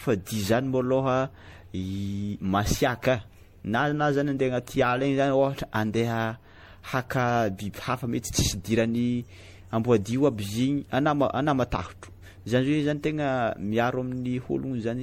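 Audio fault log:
Throughout, generation loss: the speech sounds swirly, smeared and hollow, with blurred consonant attacks and nothing above 16.5 kHz. The damage goes beyond what one low-bitrate pass would leave. The likely cause is repeated MP3 decoding and re-encoding, around seven passes, at a rate that points to roughly 64 kbit/s. Each pass quantised again on a shifted frame grid, so noise and spectral gaps piled up rather than staying fixed.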